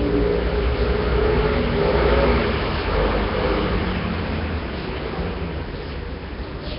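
A low-rate speech codec, likely Nellymoser compression from old Flash recording, has heavily damaged the whole clip. Quiet bands are replaced by synthetic noise, leaving a rough hiss and smeared, underwater texture around every sound. Nothing sounds above 5.3 kHz, which fits a rate near 22 kbps.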